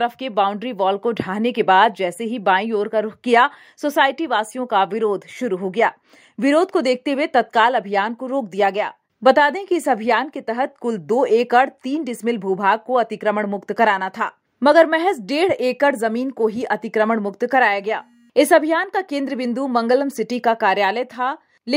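No audible technical faults.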